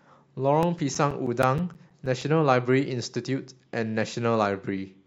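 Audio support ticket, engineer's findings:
CD scratch ticks in the speech, 0.63 to 2.37 s. Twelve regular ticks, about seven per second, each around 10 ms or shorter. Probable component: scratched disc surface. One burst per revolution exceeds error correction. Player conceals it by interpolating or muting.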